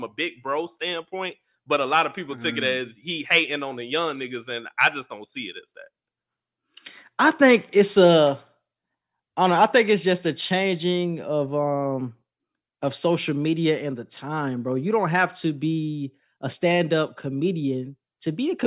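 Nothing in this recording stands out as a technical fault, so there's no problem to point to at any moment of it.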